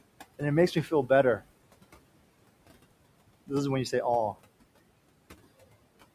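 A speech recording in which a noise suppressor runs throughout, pushing the steady background down by about 21 dB frame by frame. The room noise, about 18 dB below the voice, therefore dips in the gaps and swells back under speech. Between 0.75 and 1.10 s the suppressor also mistook part of the speech itself for noise and pulled it down by up to about 10 dB. This is speech cut by the noise suppressor, and it leaves roughly a tenth of a second of soft sound swallowed and faint.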